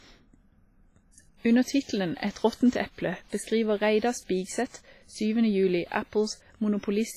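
Throughout the speech, the sound rings and smears, with a washy hiss that swells and fades with the voice. Nothing is heard above 15.4 kHz. This heavy damage is likely WMA compression, and it fits a low bitrate near 24 kbps, where weak detail is discarded.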